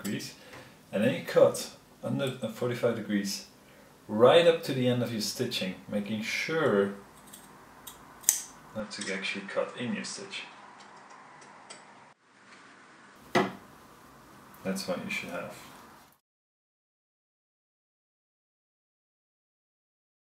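From 8.80 s to 13.16 s the sound narrows abruptly, with nothing above 9.5 kHz, and drops about 5 dB in level, with no gap at either switch. This is likely an input switched to a poorer device. On a spectrogram the upper band is cleanly cut off for that span, with a new low noise floor well below the signal. On the waveform the envelope steps down at 8.80 s and recovers at 13.16 s.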